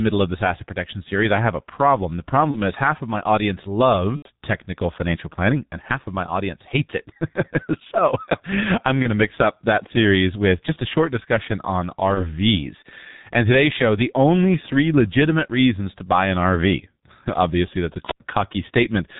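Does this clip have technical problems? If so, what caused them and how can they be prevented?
Yes. G.723.1 codec damage runs through the whole clip: the speech sounds muffled and hoarse, with smeared consonants. This codec discards everything above 4 kHz and updates its model of the voice only once per 30 ms frame, so fast articulation gets blurred. The heavy degradation fits the low 6.3 kbit/s mode. To prevent it, use a wideband codec such as Opus or G.722 at a healthy bitrate.

VoIP packet loss concealed by the speech codec appears at 2.51 to 2.58 s, just before "is half of my"; at 4.17 to 4.29 s; at 9.02 to 9.10 s; and at 12.14 to 12.34 s, right after "a short discussion on". Each time the decoder stretches its last pitch and filter into a sound that fades. The 4.17 s gap covers about 90 ms, and the others fit a single lost 30 ms frame. The voice stays thin until the codec's state recovers. 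To prevent it, use a wired or less congested network path, plus jitter buffering and forward error correction.

A wireless microphone squelch dropout occurs at 18.05 to 18.20 s, right after "that's a". The FM radio signal fades, a rise of hiss gives way to roughly 91 ms of near silence as the receiver's squelch mutes, and then the voice returns. To prevent it, keep the transmitter in line of sight, check its battery, and use diversity receivers with properly placed antennas.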